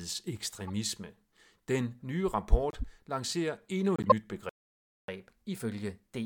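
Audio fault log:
0.67–0.72 s, 2.69–2.84 s and 3.96–4.12 s, corrupt frame decoded: Three short bursts of chirpy, squeaky noise cut through the speech. Each lasts about as long as a few damaged frames. The decoder played them despite flipped bits. Misread gains and codes put energy at the wrong frequencies. The first two are faint, peaking near -35 and -30 dBFS. The third is far louder, reaching about -5 dBFS, and is plainly audible.
4.49–5.08 s, playback stall: The speech stops dead in mid-flow. The silence lasts about 590 ms. The likely cause is the player running out of buffered data or its thread being blocked. Output stays silent until it recovers, and then the sound resumes.
5.08–6.25 s, catch-up at higher speed: After the stall the speech runs fast to the end of the clip. It plays at 1.1 times normal speed. The pitch rises by about 1.5 semitones. The player is resampling its backlog to win back the lost time, so speed and pitch rise together.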